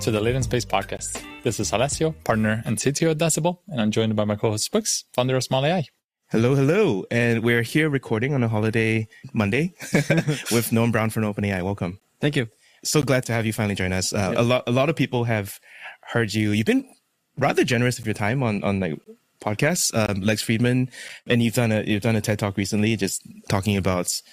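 Gaps between stream segments interrupt the sound at 0.97, 2.99, 12.0, 13.02 and 18.03 s, from 19.04 to 19.06 s, from 20.06 to 20.09 s, and at 21.09 s. Each is a hard-edged silent hole of about 7 to 23 ms, falling on one-second boundaries, which points to one-second segments. The time stamps of adjacent segments fail to meet, so the player inserts silence. Nothing is lost; the sound simply stalls briefly and resumes.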